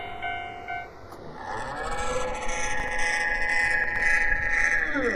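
Throughout, channels drifting apart on clocks about 100 ppm off let their delay slide toward half a millisecond. Summed to mono, this gives slow flanging, unlike a fixed comb. At 2.80 to 2.88 s and 3.84 to 4.00 s, chunks out of order play 40 ms blocks late, jumbling the sound. Unlike dropouts, nothing is missing.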